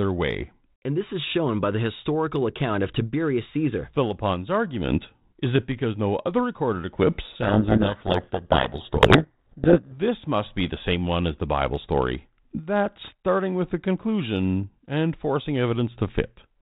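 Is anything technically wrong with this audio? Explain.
Yes. From 7.24 to 9.95 s there is a codec payload misread: the receiving end unpacks the G.726 code words with their bit order reversed, so each few-bit difference value is decoded as the wrong step against the adaptive predictor. The speech is buried under harsh, grinding distortion for those 2.7 seconds, then clears once both sides agree on the packing again. The surrounding speech comes through the 32 kbit/s G.726 path with only light codec damage and nothing above 4 kHz.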